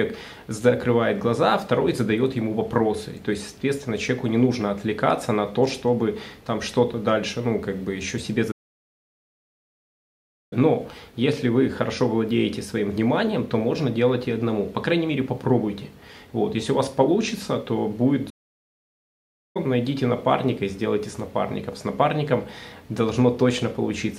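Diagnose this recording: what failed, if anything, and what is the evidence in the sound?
Playback stalls at 8.51 to 10.53 s and 18.29 to 19.57 s: the sound cuts out mid-flow and the output stays silent for 2.0 s, then about 1.25 s. This is at the playback stage, likely the player starving for data or its output thread being blocked until it recovered.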